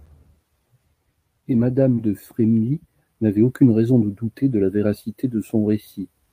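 At 1.95 to 1.99 s, short concealed packet loss: 20 ms of speech missed the decoder, and the receiver's extrapolation of the preceding sound leaves a brief smear.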